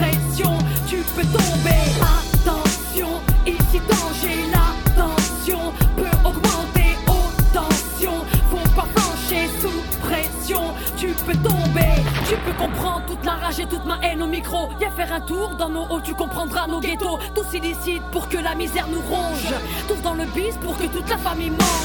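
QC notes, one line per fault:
throughout: mains hum, a steady 60 Hz tone with low harmonics sitting roughly 10 dB under the programme, from a ground loop or nearby transformer coupling in.
12.63–12.66 s: lost LE Audio frames. A 30 ms gap, which fits three lost 10 ms frames, where the LC3 decoder repeats the last spectrum with random signs, producing a brief noisy smear.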